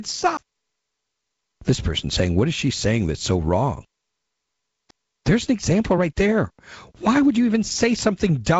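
At 0.37 s and again at 4.91 s, a CD skip occurs. The laser jumps to another turn of the spiral. Each gives a tick, a mute of roughly 10 ms and 7 ms respectively, then sound resuming from elsewhere.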